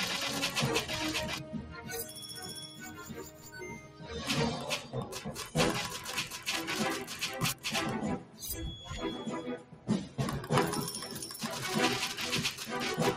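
A constant DC offset shifts the whole waveform off zero, so it is not heard directly but eats headroom and leaves steady energy at the very bottom of the spectrum. Throughout the clip, a noise suppressor designed for speech stays active on non-speech audio and treats sustained parts as noise, so levels pump and thin by around 10 dB. The suppressor also cuts sound outright: from 1.37 to 2.2 s by about 7 dB, then from 2.61 to 4.11 s, from 8.18 to 8.42 s and from 9.57 to 9.88 s by about 10 dB each. In these spans held material and decays sink while sharper onsets get through.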